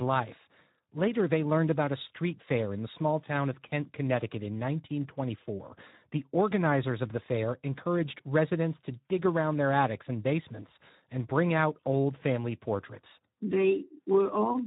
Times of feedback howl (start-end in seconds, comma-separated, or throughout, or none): none